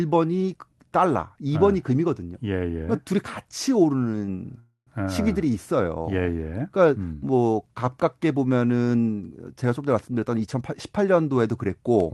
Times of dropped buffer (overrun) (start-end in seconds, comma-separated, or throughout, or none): none